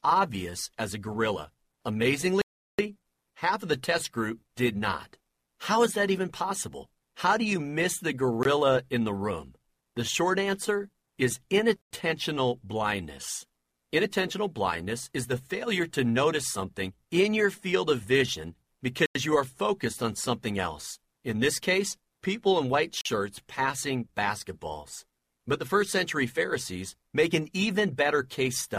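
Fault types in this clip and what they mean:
block of digital silence: the output buffer was likely not filled in time, so blocks went out as zeros, two of them 93 ms long, which fits a 4096-sample buffer. The sound cuts out and back, ranging from a 19 ms gap to a 0.37 s hole.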